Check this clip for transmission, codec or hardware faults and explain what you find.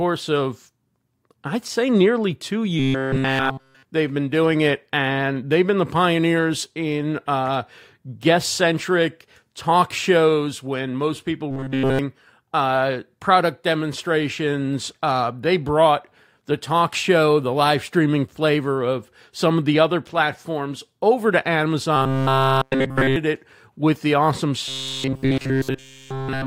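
One fault recurs: robotic sound from repeated short buffers, at 2.79–3.83 s, 11.51–11.99 s, 21.96–23.16 s and 24.68 s to the end. The speech becomes a rigid metallic buzz at 133 Hz. The likely cause is a buffer of about 7.5 ms replayed while new audio was skipped.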